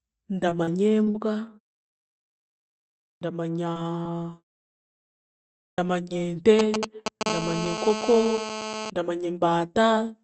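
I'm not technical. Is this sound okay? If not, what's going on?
No, there are a few problems.

From 0.49 to 1.16 s there's repeated packet loss, which gives a robotic sound. Bits of the call kept going missing, about five gaps in under a second. Each gap was patched by stretching the sound just before it, so it comes out choppy and robotic.

At 3.08 s and again at 5.64 s you get a clipped start after a pause. After a second or so of silence, the playback side dozed off and took a moment to wake up, so roughly the first 0.13 s of speech is chopped off each time.

Between 3.73 and 3.77 s, and again between 4.03 and 4.07 s, there's a short concealed packet loss. A tiny piece of audio, about a fiftieth of a second, never arrived, and the gap was smoothed over. It sounds like a quick smear or wobble.

From 4.23 to 4.27 s there's a short stall from a late packet. A piece of audio arrived late, so the last sound was held a touch too long while the system waited. 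Nothing is lost, but that sound drags a little.

From 6.59 to 7.23 s you can hear GSM signalling bursts. An older mobile phone nearby was talking to its network, and the audio gear picked that up. It's a galloping dit-dit-dit of short buzzes, about as loud as the speech.

From 7.26 to 8.90 s there's GSM phone buzz. The same kind of phone is now in a call and pulsing 217 times a second, which gives a steady, raspy buzz under the speech. It's a bit quieter than the voice.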